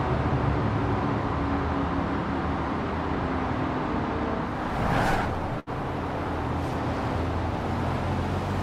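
At 5.59 to 5.69 s the sound briefly smears into a held, fading sound for about 70 ms, then jumps ahead. This is a burst of packet loss. The receiver stretched and faded the last audio it had, and about 60 ms of the sound never arrived.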